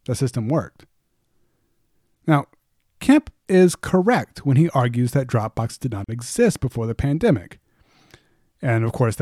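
At 6.04 s, between "drop boxes did not" and "exist before the pandemic", a gap at a join of encoded pieces opens for about 43 ms. Separately encoded pieces kept their encoder delay and padding, so the silence has smeared edges, and the speech resumes exactly where it stopped, with nothing missing.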